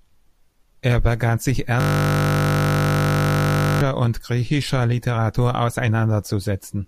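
From 1.80 to 3.81 s, after "begann sich", a system hang loop: the stalled system's hardware replays one 20 ms buffer, a steady 50 Hz buzz.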